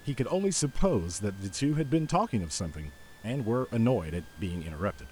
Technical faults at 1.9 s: switching supply whistle

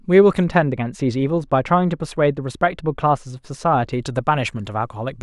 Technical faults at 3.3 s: de-emphasis applied wrongly

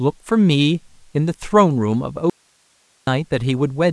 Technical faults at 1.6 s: none

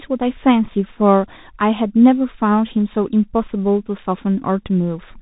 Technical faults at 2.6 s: Bluetooth CVSD headset codec

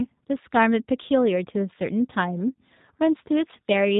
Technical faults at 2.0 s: G.729 codec

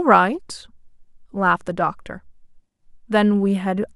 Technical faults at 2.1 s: none

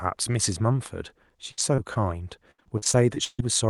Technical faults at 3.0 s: repeated packet loss (robotic sound)

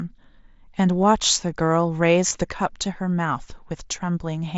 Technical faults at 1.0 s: concealed Bluetooth headset packet loss

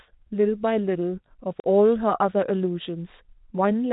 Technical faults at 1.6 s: packet loss filled with silence

